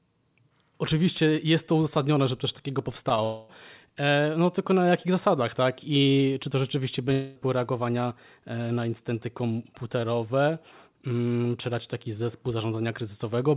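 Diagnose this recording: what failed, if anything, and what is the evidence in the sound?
Short concealed packet loss at the network and jitter-buffer stage: brief smears at 3.09, 3.15 and 3.17 s, where about 10 ms of speech went missing and was resynthesised. On a spectrogram the harmonics blur slightly. The waveform shows the fill blending back into the real signal.

Long network dropout, the likely cause of two longer gaps, at 3.24–3.50 s and 7.13–7.37 s. Each gap lasts about a quarter second and is filled throughout with a fading continuation of the last sound, never dropping to silence. The spectrogram shows the last spectrum smeared on across the gap. In the waveform the fill has a regular, decaying envelope. All of this sits within the G.711 band, with nothing above 4 kHz.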